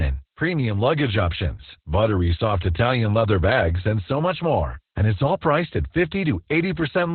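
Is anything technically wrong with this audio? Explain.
Yes, the whole clip has heavy Opus voice compression: the SILK coder cuts everything above 4.2 kHz and codes the excitation coarsely, which fits roughly 8 kbps, so the speech sounds muffled, hoarse and slightly robotic.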